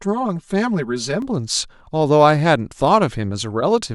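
From the start to 1.22 s the speech sounds hollow and phasey: channel delay comb filtering, one channel about 5 ms late, carving notches from roughly 100 Hz upward.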